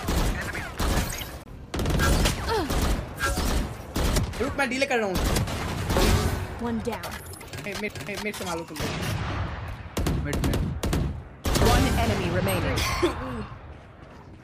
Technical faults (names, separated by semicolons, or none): CD skip